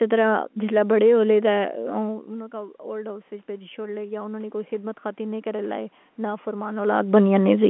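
Speech heard over a G.711 telephone line, carrying roughly 200 Hz to 3.4 kHz. The fault is automatic gain rising, from 1.54 s to 6.95 s. After the talker moves back from the microphone around 2 s, the input level falls by about 15 dB. The gain control responds by slowly adding about 10 dB, so the voice and the room noise swell together over several seconds instead of the level stepping back up at once.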